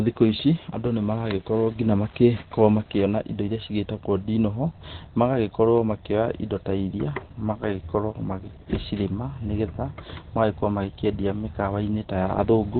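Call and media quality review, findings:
Opus compression, whole clip: speech muffled, hoarse; top end absent. Spectrogram shows a hard ceiling near 4.2 kHz with empty space above. Likely an Opus encoder dropped to its narrowband SILK speech mode, consistent with a starved rate around 12 kbps. Heavy codec damage: harmonics roughened, consonants dulled.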